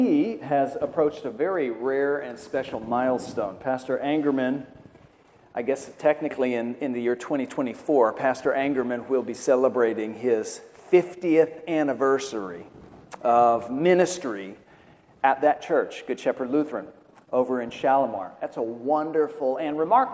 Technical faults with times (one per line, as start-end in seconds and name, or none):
none